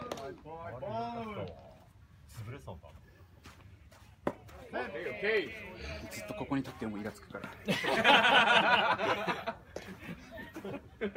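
No technical faults are audible.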